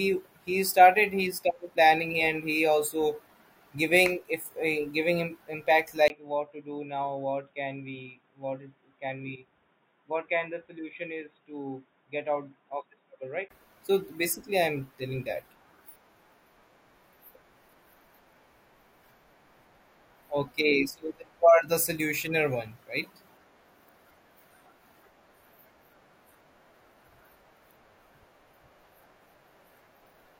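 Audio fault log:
6.08–13.50 s, input switched to a poorer device: just after "him impact", a brief gap, then sound capped near 3.8 kHz, roughly 10 dB quieter, with new faint hiss, likely another microphone; unlike filtering, level and noise shift too.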